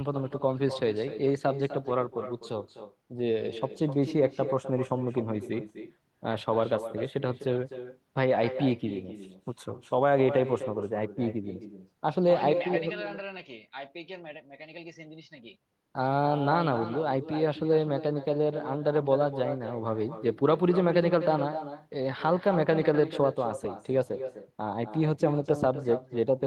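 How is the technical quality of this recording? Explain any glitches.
The recording has one persistent fault: echo with no canceller, present from start to finish. The far end plays the call through a loudspeaker. Its microphone picks that sound up and sends it straight back, with nothing to remove it. Each phrase of speech returns after roughly a third of a second, the round trip through the network. The copy sits about 11 dB below the original. It sounds thinner, a constant ghostly shadow trailing the talker.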